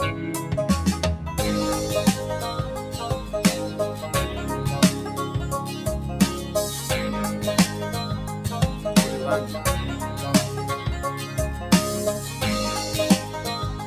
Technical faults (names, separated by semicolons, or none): noise suppressor applied to music or sounds